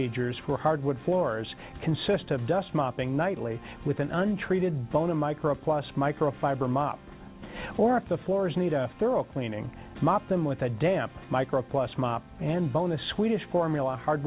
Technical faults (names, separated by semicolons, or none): none